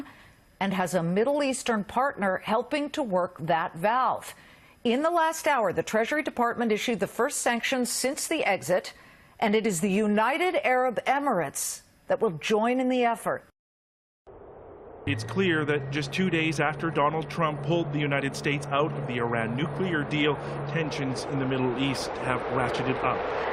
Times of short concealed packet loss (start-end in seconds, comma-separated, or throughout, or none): none